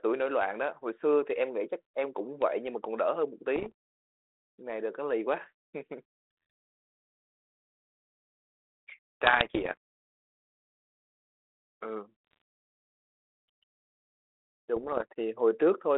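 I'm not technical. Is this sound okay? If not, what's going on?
No. Bit errors on an ADPCM link scrambled some of the coded data, briefly confusing the decoder. You hear pops and rough, jumpy bursts at 3.56–3.72, 9.24–9.77, 12.27–12.42 and 14.76–15.04 seconds.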